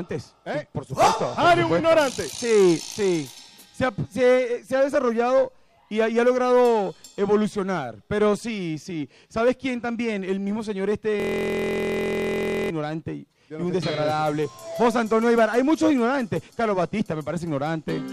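From 11.20 to 12.70 s, a system hang loop: the system froze while the hardware kept cycling one 23.22 ms buffer, which fits 1024 samples, producing a steady 43.1 Hz buzz.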